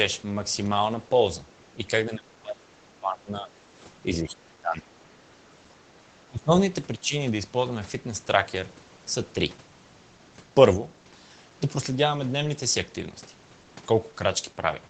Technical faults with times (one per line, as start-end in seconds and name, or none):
2.18-3.51 speech suppressed in double talk
4.22-4.88 speech suppressed in double talk
5.23-5.27 speech suppressed in double talk
5.86-6.51 speech suppressed in double talk
6.99-7.14 speech suppressed in double talk